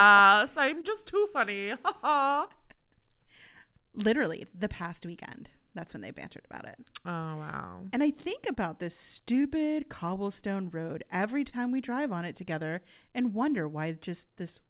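Clock drift between sender and receiver runs through the whole clip. The sender's clock runs about 2% slow, so the receiver's jitter buffer keeps draining. Small timing hiccups recur at uneven intervals, and the band-limited sound, with nothing above 4 kHz, fits a G.711 A-law call at 64 kbps.

Repeated timing corrections run from 0.27 s to 14.1 s. The receiver keeps stretching short pieces to make up for the slow sender, adding roughly 200 ms overall. Playback is at about 99% speed, heard as a slightly dragging, unsteady tempo.

Scattered short gaps come from 0.81 s to 2.51 s: about four late or lost packets, the longest around 20 ms and roughly 50 ms patched in total. The receiver filled each hole by continuing the last sound, so brief ticks and smears appear.

Scattered short gaps return from 4.83 s to 5.87 s, with about three concealed holes of roughly 10 ms each, about 30 ms in all. 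Each was bridged by extending the preceding sound, leaving brief ticks and small smears.

Scattered short gaps appear again from 7.52 s to 8.58 s: about three holes, the longest around 15 ms, roughly 30 ms filled. The concealment continues the previous sound across each one, and the result is heard as brief ticks.

A short stall from a late packet occurs at 11.49 s. The packet missed its slot, the jitter buffer ran empty, and the receiver held the last sound for 29 ms until it arrived. Nothing is lost, but that sound lingers with a slight buzz or dip.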